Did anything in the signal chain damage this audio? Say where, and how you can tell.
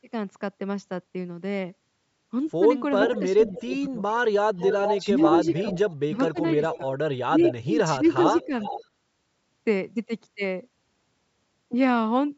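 Yes. The damage comes from call processing, specifically a loudspeaker-side echo canceller. A delayed copy of the speech, trailing the original by about 436 ms, comes back at 3.06–3.73 s, 4.61–6.78 s, 7.49–7.54 s and 8.25–8.85 s. Most of it sits about 10 dB below the direct speech, but from 4.61 to 6.78 s it reaches about 5 dB below. On a spectrogram the harmonic patterns repeat, shifted right by that fixed delay. This is an echo leak, likely because the canceller let residual loudspeaker pickup return down the line.

From 3.19 to 8.53 s, the same stretch where the echo overlaps, the speech level dips in pieces, dropping by as much as around 25 dB and adding up to about a second and a half of lost or thinned sound. In the waveform the envelope is notched with sudden troughs, and the spectrogram shows vertical gaps across the whole band. This is speech suppressed in double talk: with both sides active, the canceller likely attenuated the talker along with the echo it was fighting.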